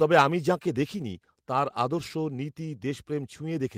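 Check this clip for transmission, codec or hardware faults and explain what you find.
One fault stands out: a microphone volume stepped down at 1.02 s. The speech and the background noise beneath it both drop by about 3 dB in a single instant and stay at the lower level. The likely cause is call software cutting the device's input volume after judging it too hot. What sets this apart from automatic gain control is the abruptness. AGC glides over many milliseconds, while this is one clean step with no recovery.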